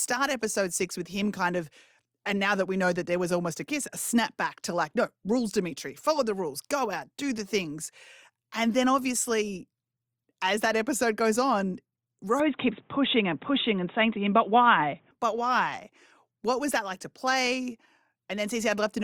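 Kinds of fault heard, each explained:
Input switched to a poorer device: At 12.4 s the speech turns dull and boxy, with nothing above 3.8 kHz, until 15.1 s. There is no gap at the switch. Level shifts about 5 dB, and faint new noise appears. A changed input is likely.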